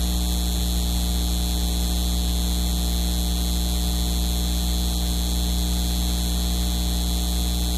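No dropouts, clicks, distortion or timing faults are audible anywhere in the recording.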